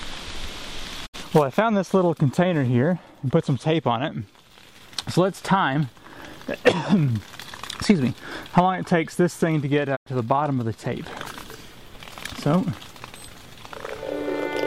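The receiver lost valid frames and muted twice, a digital broadcast dropout. At 1.05–1.16 s and 9.95–10.08 s the sound fades out over 20 ms, leaving 64 ms and 96 ms holes before returning.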